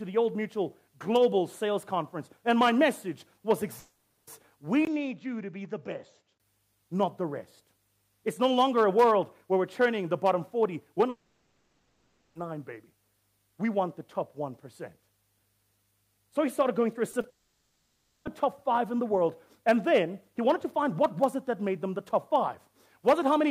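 From 3.79 to 4.29 s the sound gives way to a smeared continuation of whatever came just before, a buzz or hiss that carries on for the whole half second rather than dropping to silence. This is a long network dropout, likely caused by a run of packets that never arrived. The receiver kept extrapolating the last sound until real audio resumed, and the missing stretch is simply gone. Its length and its lack of any true content set it apart from a brief concealed loss.

From 4.85 to 6.40 s the character changes abruptly. After a 20 ms gap the sound turns duller and boxier, with nothing above 7.6 kHz, a few decibels quieter, and carrying a faint new noise floor well below the signal. It then clears again. This points to the input switched to a poorer device, likely a fallback microphone or a headset call profile. Unlike a dropout, the audio keeps flowing the whole time and only its tone, bandwidth and background change.

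The same long network dropout returns from 11.09 to 12.37 s, the longest at about 1.3 s, with the filled sound going on throughout.

At 17.11–17.15 s and 17.21–17.25 s there are two short concealed packet losses. Each is 20 ms bridged by continuing the preceding sound, heard as a tiny smear or wobble rather than an obvious gap. A third, longer dropout follows at once, from 17.29 to 18.27 s, running for nearly a second.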